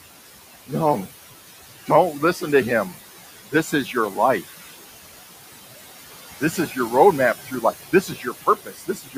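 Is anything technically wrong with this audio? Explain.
Yes, there are two related faults, both from a noise suppressor acting on speech.

Noise suppressor artifacts run throughout the clip. The suppressor estimates the steady background in each frequency band, frame by frame, and pulls those bands down by about 15 dB. The room noise, which sits about 13 dB below the speech, therefore sinks in the gaps between words and swells back up underneath them.

Speech cut by the noise suppressor occurs at 3.51 to 3.96 s, 4.48 to 4.71 s, 6.4 to 6.91 s, 7.45 to 7.64 s, and from 7.92 s to the end of the clip. In each of these spans the suppressor mistook quiet parts of the speech for noise and turned them down by about 13 to 17 dB. The deepest cut is in the final stretch, which also has the most affected material, roughly 0.7 s in total. In the earlier spans only brief fragments are hit. Soft consonants and word endings come out swallowed or faint.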